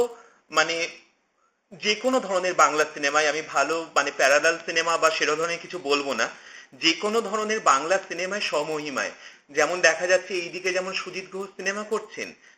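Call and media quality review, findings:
Buzz at 100 Hz whenever signal is present, whole clip. Resampler restarted on every block, 16 kHz to 48 kHz, 10 ms blocks. Each block converted without neighbouring samples, leaving an edge error at every block boundary.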